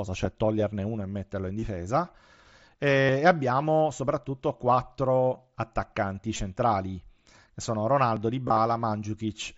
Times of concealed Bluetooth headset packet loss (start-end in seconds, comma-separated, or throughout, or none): 1.59-1.62, 3.01-3.09, 5.34, 6.36-6.39, 8.48-8.57